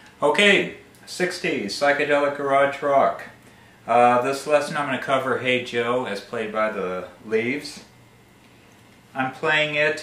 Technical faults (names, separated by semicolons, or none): none